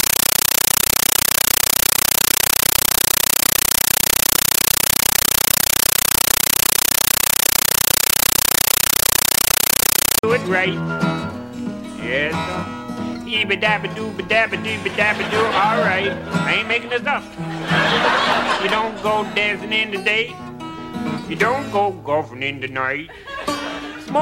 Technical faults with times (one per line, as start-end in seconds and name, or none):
0.00-10.23 compressed stream played as audio